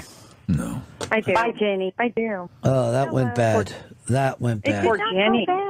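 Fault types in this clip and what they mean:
No faults are audible anywhere in the clip.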